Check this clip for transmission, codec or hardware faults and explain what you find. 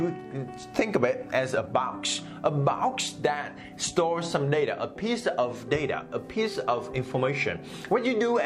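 I found no transmission, codec or hardware faults in this clip.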